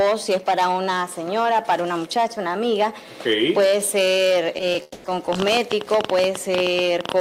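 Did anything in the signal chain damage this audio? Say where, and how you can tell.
Yes. Short stall from a late packet at 4.72 to 4.76 s: network jitter buffer ran dry, so the receiver held the last sound about 20 ms, then resumed.

Call audio freeze at 4.82 to 5.06 s: a 220 ms fading buzz or hiss with no silence, likely packets delayed in the network, inserting a gap before playback continues.

Train of clicks from 5.33 s to the end: irregular ticks about 17 per second, roughly 15 dB above the sound, likely interference or a faulty connection or power supply.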